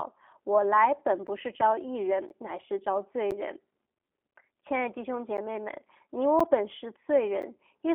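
Right from the start the whole clip has that G.729 codec sound. The speech comes through clearly but a bit rough and synthetic, because the codec rebuilds it from a vocal-tract filter, a pitch predictor and a few pulses per frame instead of keeping the actual waveform. The damage is plainly audible. The band sits roughly between 250 Hz and 3.4 kHz, with nothing above 3.5 kHz, which fits an 8 kbit/s G.729A-style phone link.

Then, starting at 1.27 s and running to about 7.43 s, you get periodic USB or driver dropouts. Every 1.024 s a short gap of around 10 ms is punched into the audio and filled with silence, roughly seven in total. Something is holding up the audio path on a fixed timer and the buffer runs dry each time. You hear a regular little tick or pop, evenly spaced, cutting into the speech.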